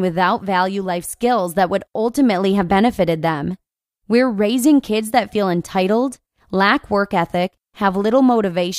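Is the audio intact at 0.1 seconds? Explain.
Yes, the audio is intact at 0.1 s, with no dropout, click, distortion or other fault at that moment.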